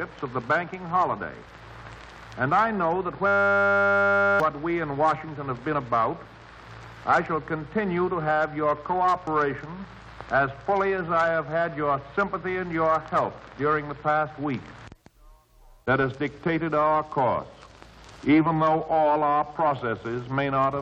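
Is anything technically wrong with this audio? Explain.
Yes. From 3.27 to 4.4 s there is a system hang loop: the system stalled while the hardware kept replaying a 10 ms buffer over a hundred times, giving a steady 100 Hz buzz and about a second of lost audio. Unlike a dropout, it repeats sound rather than going silent.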